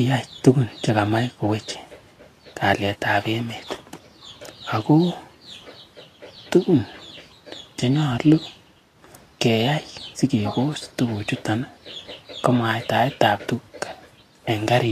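Throughout the speech, the treble is grainy and hissy, attacks are blurred, and nothing remains above 14.2 kHz. This plainly audible damage likely comes from Vorbis compression at a rate that fits about 35 kbps, which quantises the treble so coarsely that fine detail turns into noise.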